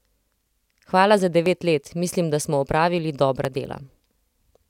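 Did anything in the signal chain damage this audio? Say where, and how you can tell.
Yes. Audio missing between chunks, at 1.46 s and 3.45 s: the speech skips forward a few milliseconds with no silence bridging it. The likely cause is the driver or buffer stage dropping samples while closing one chunk and opening the next, then butting the edges together.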